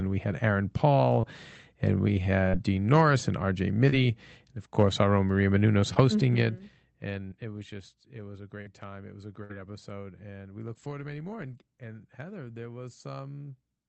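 Brief smears and wobbles interrupt the speech at 1.21 s, just before "and we", at 2.49 s, right after "and we", and at 3.89, 5.94, 7.27 and 8.61 s. Each is short concealed packet loss: 20 to 40 ms of the call arrived too late, and the receiver patched the hole by extending the preceding sound before blending back. At 9.43 to 9.51 s, between "was a" and "episode and we look", the last sound is held and fades out before the speech jumps ahead. This is a burst of packet loss: about 60 ms went missing, and the receiver stretched the last sound while turning it down, so that stretch of speech is lost.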